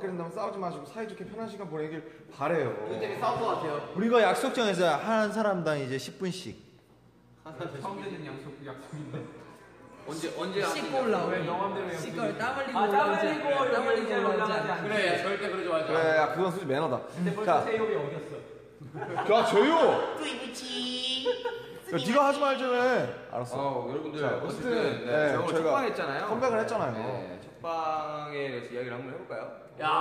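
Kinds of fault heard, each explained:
No technical fault can be heard anywhere in this audio. Nothing in the sound points to a problem in how it was captured, processed or carried.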